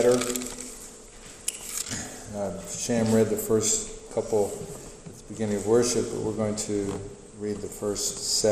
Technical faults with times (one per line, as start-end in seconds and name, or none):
0.00-8.52 MP2 compression